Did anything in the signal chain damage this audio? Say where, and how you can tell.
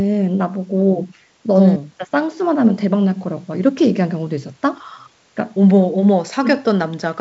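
No, no damage heard.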